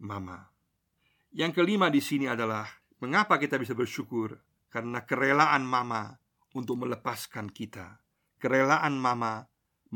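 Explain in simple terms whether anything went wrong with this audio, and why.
Nothing went wrong with the recording: the speech comes through as one steady, unbroken signal, with nothing to suggest a problem in how it was captured or delivered.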